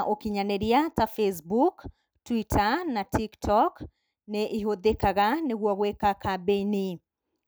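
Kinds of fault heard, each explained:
Nothing to flag here: the speech comes across without any technical faults worth listing.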